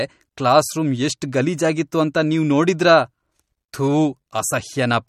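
Across the whole speech clip the sound is watery and swirly, with metallic chirps on s sounds, smeared attacks and nothing above 17.3 kHz. That is likely MP3 compression at a low bitrate, consistent with about 48 kbps, where weak frequency lines flicker between frames.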